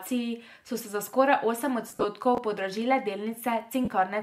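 At 1.88 s, just after "se za skoraj osem", lost LE Audio frames break up the speech until 2.05 s. About 112 ms of audio goes missing, scattered over 165 ms, which fits fifteen 7.5 ms LC3 frames, with the longest gap around 50 ms. The decoder fills each gap by repeating the last spectrum with random phase signs, so voiced sound smears into a brief noisy buzz. In the longer gaps it fades toward silence.

From 2.35 to 2.38 s, chunks out of order produce a short jumbled stutter. A 10 ms chunk arrives late and plays two chunks after its proper place, so nothing is missing but the sequence is scrambled. The three hard joins this creates surround a garbled fragment.

At 3.85 s, lost LE Audio frames return for about 30 ms, consistent with four frames. The concealment replays the preceding spectrum with scrambled signs, so this gap is heard as a short grainy smear that covers the missing speech.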